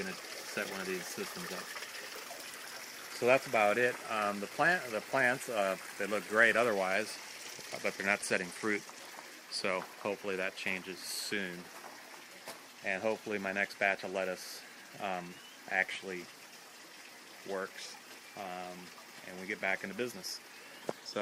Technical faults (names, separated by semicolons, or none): none